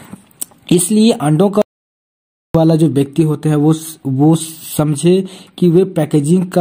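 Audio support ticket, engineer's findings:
Hard cut to dead silence at 1.62 s, audio resumes abruptly at 2.55 s; roughly 0.93 s missing. Gap is silent, no room tone or noise floor underneath. Audio dropout to silence. Likely cause: input path lost briefly (device disconnect, failed link or stray mute) while recorder kept writing silence. Content during gap unrecoverable. Check cabling/interface connection and mute state around that point.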